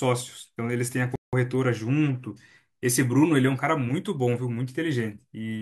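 Speech, with one playback stall: from 1.16 s to 1.33 s the sound halts mid-flow for 173 ms, likely because the player ran out of data or its thread was blocked. The waveform drops to silence there, and the spectrogram shows a sharp-edged, empty vertical band.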